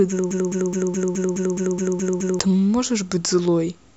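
From 0.31 to 2.39 s a broken-record loop replays one 210 ms fragment ten identical times, unlike a dropout; a stalled player likely resent it.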